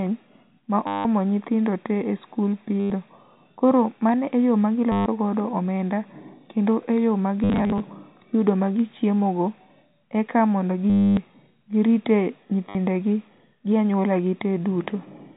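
Six bursts of packet loss with last packet repeated break up the speech: 0.87–1.05 s, 2.8–2.9 s, 4.92–5.06 s, 7.44–7.8 s (scattered, longest gap 60 ms), 10.9–11.17 s and 12.69–12.75 s. The repeated slices buzz robotically at about 100 Hz, fitting 10 ms packets. A spectrogram shows frozen, stamped-out columns under the 4 kHz G.711 ceiling; the waveform shows identical repeating blocks.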